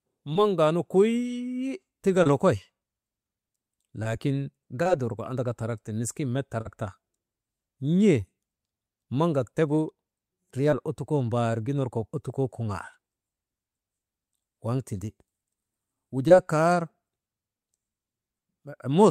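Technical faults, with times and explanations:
0.33–0.37, 2.23–2.27, 4.83–4.87, 6.61–6.67 and 16.28–16.32 s: short concealed packet loss. Each is a brief smear or wobble where about 20 ms of audio went missing, about 40 ms at 6.61 s. The receiver covered each gap by extending the preceding sound.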